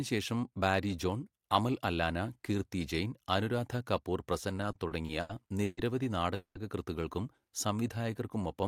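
From 4.56 to 5.78 s, repeated stalls (stutter) appear: seven short gaps, the longest 130 ms, are filled by continuing the last sound. Nothing is lost, but the speech drags.

At 6.35 s a 200 ms call audio freeze starts as a fading buzz or hiss and ends in 100 ms of silence, likely from packets delayed in transit, before resuming.

From 7.41 s to the end, a jitter buffer slow-down repeats pitch periods, adding 116 ms. The speech runs at 92% speed with unchanged pitch.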